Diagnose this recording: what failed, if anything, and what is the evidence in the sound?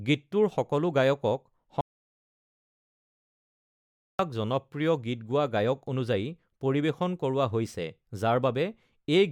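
The speech stops dead at 1.81 s and returns abruptly at 4.19 s, leaving about 2.38 s of silence with no room tone, hiss or tail from the preceding sound. That is an audio dropout to silence. The input feeding the recorder was likely lost, through a disconnected device, a failed link or a stray mute, while the capture chain kept writing silence, so whatever was said in that stretch is gone.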